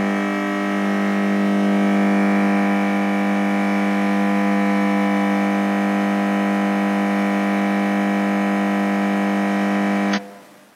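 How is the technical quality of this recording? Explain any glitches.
The recording has one audible glitch, near the very end.

Between 10.13 and 10.19 s, compressed frames are skipped. The decoder never played a short run of frames, because they were missing or rejected as damaged. Each frame here spans 46.4 ms. About 400 ms of audio vanishes, and playback jumps straight ahead. The sound is abruptly further along than expected.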